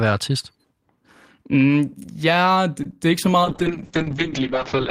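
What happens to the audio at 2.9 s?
A short stall from a late packet at 2.83 to 2.86 s holds the last sound about 17 ms until the packet arrives, showing as a flat, repeated stretch in the waveform. Short concealed packet loss at 2.91 to 2.93 s replaces about 10 ms with synthesized continuation, heard as a brief smear and seen as a blurred spectrogram patch.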